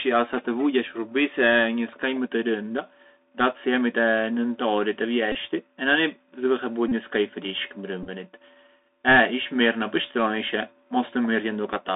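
Speech carried over a Bluetooth CVSD headset codec: the band is limited to about 200 Hz to 3.7 kHz, with a granular hiss, scratchy sibilants and slope-overload distortion on loud high content. Bluetooth headset packet repeats occur at 5.32–5.35 s, 6.89–6.93 s and 8.03–8.09 s, where re-decoded packets every 3.75 ms produce brief buzzes near 267 Hz in the first two and mostly small ticks in the scattered third, with roughly 26–30 ms of audio lost in each.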